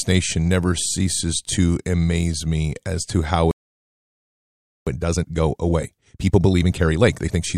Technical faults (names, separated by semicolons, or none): playback stall; time-compressed catch-up